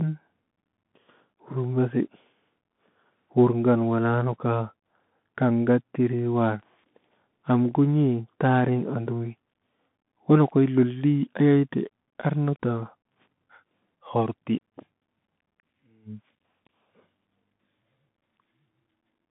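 A speech clip carrying Bluetooth CVSD headset codec damage throughout: one-bit delta steps leave granular hiss and scratchy sibilants, and a spectrogram shows energy confined to about 150 Hz–3.6 kHz, blank above 3.8 kHz.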